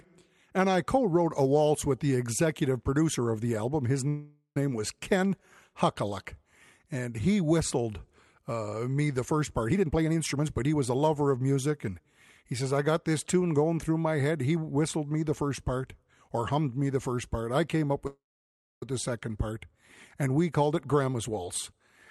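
At 4.08 s a call audio freeze inserts about 0.48 s: the last sound is stretched into a fading buzz that ends in a brief silence, likely from delayed packets draining the jitter buffer. On a spectrogram it appears as smeared, flat horizontal bands, then a short blank column. The speech resumes without loss.

From 9.69 to 11.88 s a jitter buffer speed-up plays the speech at 121% and at the same pitch, trimming roughly half a second of pitch periods to cut the built-up delay. It sounds rushed, and the waveform's syllables sit visibly compressed together.

At 18.07 s a second call audio freeze adds 0.75 s, likely for the same reason. Only a short buzz is heard before about 0.61 s of silence, which shows as a flat, empty stretch in the waveform. Nothing is missing when the speech resumes.

A milder jitter buffer speed-up runs from 20.62 to 21.80 s at 107%, removing about a tenth of a second. 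The pace sounds hurried, and the speech energy, which stays below the 12 kHz call band edge, packs a little closer on the spectrogram.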